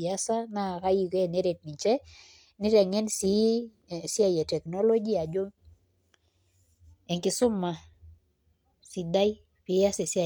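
No technical faults can be heard anywhere in the recording of speech; the signal stays continuous and stable throughout.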